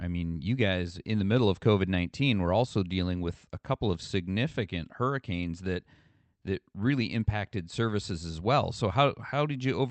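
No technical faults occur anywhere in the speech; the call path carrying it, with its band limit around 8 kHz, works as expected.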